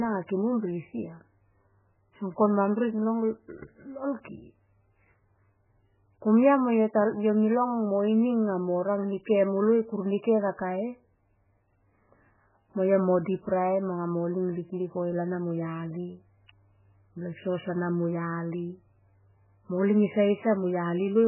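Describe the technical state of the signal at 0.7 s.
At 0.7 s the speech carries heavy damage that runs through the whole clip, likely MP3 compression starved of bits, fitting something as low as 8 kbps. Nothing survives above 3 kHz, and the weak frequency lines flicker on and off, giving a watery, swirly smear.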